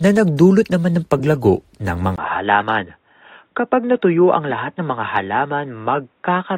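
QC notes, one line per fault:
1.18–1.25 s and 2.60 s, corrupt frame decoded: right after "nagdulot naman ng", then again, short blips where damaged frames got played anyway and scattered energy at wrong frequencies, peaking around -15 dBFS.
2.16 s to the end, input switched to a poorer device: a 20 ms gap, then the sound goes boxy with nothing above 3.8 kHz, drops about 5 dB, and a faint new noise floor appears. That's likely a change to a narrower-band microphone or headset profile.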